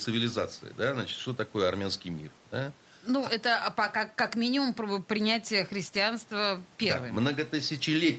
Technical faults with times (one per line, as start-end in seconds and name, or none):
none